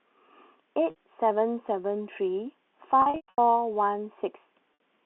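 A brief buzzy hold at 0.90 to 0.96 s and again at 4.74 to 4.79 s, each bridging about 60 ms, is packet loss with pitch repetition: the receiver loops the last pitch period across the gap. From 3.02 to 3.38 s the dropouts total 280 ms, the longest run 120 ms, so the repeated period fades to silence before the sound cross-fades back. All of it sits within the 250 Hz to 3.5 kHz G.711 telephone band.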